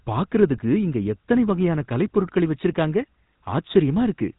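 The whole clip carries GSM full-rate codec damage, and it is plainly audible. Nothing is heard above 3.8 kHz. The codec models the vocal tract and excites it with coarse regular pulses. That gives the speech a buzzy, gravelly roughness throughout. The bitrate sounds like about 13 kbps.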